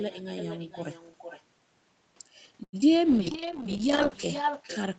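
Right from the start there's echo with no canceller: the far end's loudspeaker feeds back into its mic, so every phrase returns about half a second later, roughly 11 dB down and thin. At 2.63 s a short stall from a late packet holds the sound for about 96 ms until the data turns up, a stretched, slightly buzzy moment with nothing lost. Just after, at 2.81 to 2.84 s, a short concealed packet loss drops roughly 20 ms and patches about 7 ms with a quick smear. Then from 3.06 s to the end, a call bitrate drop sets in: the encoder is starved, and the sound turns rough and watery, consistent with falling from around 32 kbps to about 8 kbps, bottoming out for over a second.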